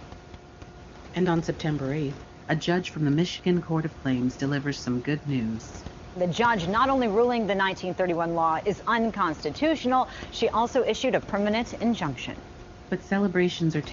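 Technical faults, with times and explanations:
No technical faults are present, so there are no times or explanations to list.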